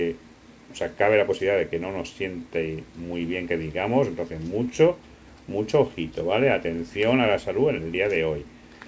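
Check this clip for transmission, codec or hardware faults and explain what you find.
Nothing stood out on listening to the clip.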